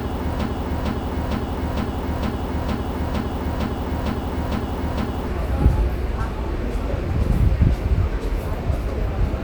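A broken-record loop is already under way at the start of this everyday-sound recording and lasts until 5.27 s. A 458 ms fragment repeats back to back 11 times, likely because playback or the stream stalled, and the audio for that span is lost.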